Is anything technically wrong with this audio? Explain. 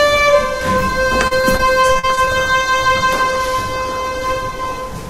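Yes. From 1.27 to 2.29 s there is repeated packet loss, giving a robotic sound: audio data kept going missing, and each hole, the longest 40 ms, was patched by extending the preceding sound. About a fifth of that stretch is filled in, so it turns choppy and robotic.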